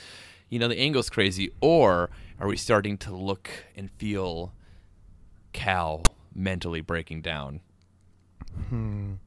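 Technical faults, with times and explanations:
6.05 s, file tags played as audio: a brief hard-edged rasp just before "mentally breaking down", where tag text got read as samples, giving a harsh one-sided burst.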